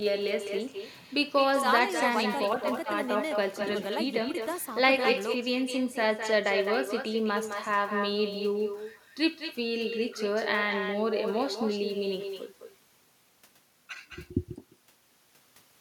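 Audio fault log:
Throughout, echo with no canceller: every phrase returns about a fifth of a second later at about 7 dB below the speech, thinner, because the far end's loudspeaker feeds its microphone and the round trip sends the talker's own voice back unremoved.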